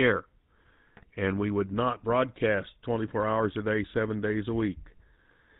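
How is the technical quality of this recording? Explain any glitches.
The technical quality is poor. The speech has a constant buzzy, gravelly roughness and a dull, band-limited top end, with one sharp glitch early on.

Throughout, the GSM full-rate codec damage is plainly audible. The roughness and grit come from the coder rebuilding the voice by driving a vocal-tract filter with a sparse, regularly spaced pulse excitation that keeps only every third sample. Nothing survives above 4 kHz, so sibilants and brightness are gone. The character fits GSM full rate at about 13 kbps.

From 0.97 to 1.04 s, just before "and we would not", GSM bit errors break the sound into a brief squawk and gargle. Corrupted bits reached the decoder, so the coded speech values for those frames were wrong. That distorted the sound for an instant. The length fits about four damaged 20 ms frames.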